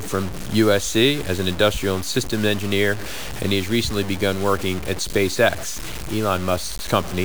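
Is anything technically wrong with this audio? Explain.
Yes, the whole speech clip has grainy distortion that tracks the voice, with noise roughly 15 dB below the signal. That's likely low bit depth without dither: truncation to something like 5 bits.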